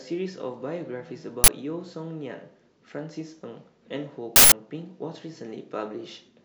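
Uninitialised buffer bursts hit at 1.44–1.48 s and 4.36–4.52 s. Unwritten memory plays as samples, causing loud digital noise that shows as tall waveform slabs and broadband spectrogram blocks.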